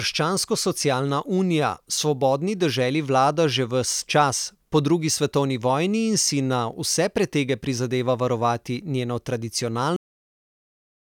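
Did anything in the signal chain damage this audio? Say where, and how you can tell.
Yes. The speech has a cut-off end at 9.96 s. It stops mid-sound there and drops straight to digital silence with no natural decay, and that silence continues to the end of the file, a little over a second later. The damage is at the storage or recording-buffer stage: the final buffers of audio were never written out, so the file ends with silence in place of the last part of the utterance.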